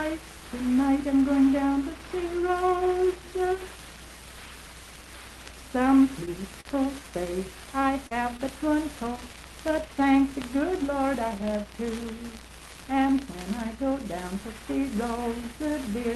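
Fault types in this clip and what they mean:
Short concealed packet loss: Audio arrived too late for the decoder, so the receiver synthesised a continuation of the preceding sound and then crossfaded back into the real signal. At 6.25 to 6.29 s about 20 ms is lost and covered by 12 ms of fill. At 8.07 to 8.13 s about 40 ms is lost and covered by 38 ms of fill. Each gap is heard as a brief smear or wobble, and a short transient inside it may disappear.
Short stall from a late packet: The jitter buffer ran dry while waiting for a delayed packet. The receiver held the last sound until the packet arrived, then resumed from the same point, so nothing is lost but playback delay grows. At 6.61 to 6.67 s the sound is prolonged by 44 ms. At 8.37 to 8.41 s it is prolonged by 21 ms. Each stall is heard as a slightly held sound with a faint buzz or dip.
Jitter buffer speed-up: After the stalls, the buffer held more audio than its target, so the receiver trimmed it down. 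From 11.07 to 11.65 s it removed short pitch-period segments repeatedly, about 40 ms in total. Playback runs at 105% speed while pitch stays unchanged. The passage sounds slightly hurried, and the 12 kHz Opus bandwidth of the call path is unaffected.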